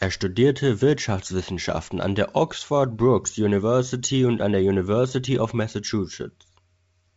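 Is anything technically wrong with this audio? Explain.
No, this is speech carried over G.722 wideband telephone coding at 64 kbit/s, with the audio band ending around 7.7 kHz as that coding path would produce, and nothing in it points to a technical fault.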